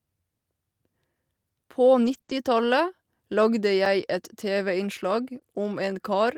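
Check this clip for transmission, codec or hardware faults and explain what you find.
Transmission faults cluster around 2 seconds into this speech clip, and two short dropouts to digital silence come later.

Between 2.05 and 2.19 s the speech turns rougher and grainier for about 80 ms, which fits four separate 20 ms packets, then again from 2.29 to 2.31 s for about 20 ms. There is no gap, because this is a lost packet rebuilt from error correction. Each missing packet was recovered from a low-bitrate copy carried in the packet that followed it. The decoder played that coarser copy in place of the original.

From 2.21 to 2.29 s, sitting between those two rebuilt stretches, the sound briefly smears and wobbles. These are two back-to-back cases of short concealed packet loss, each 20 ms of audio that never arrived in time. No error-correction copy covered them, so the receiver extrapolated from the preceding sound, extending its pitch or shaped noise, before blending back into real audio at 2.29 s.

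At 3.85 s a tiny tick is heard, and at 5.40 to 5.42 s a slightly longer short hole. Both are a block of digital silence, where samples were replaced by zeros. The first lasts about 6.8 ms and the second about 20 ms. The signal drops abruptly to nothing and returns with no fade. The likely cause is the output buffer not being filled in time.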